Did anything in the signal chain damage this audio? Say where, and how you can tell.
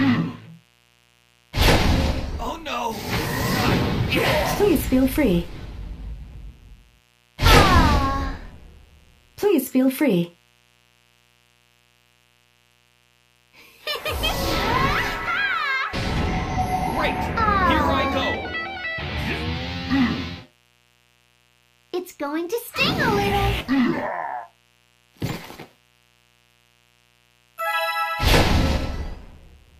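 Yes, in the analogue wiring. A steady, raspy mains buzz runs under the sound for the whole clip, about 40 dB below it. It sits on a 60 Hz fundamental with harmonics reaching several kHz, the mark of sharp switching spikes leaking in twice per mains cycle.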